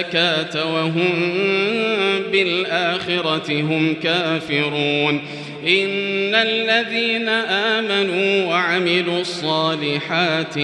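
No faults to log; nothing in the audio calls for a timestamp or a fix.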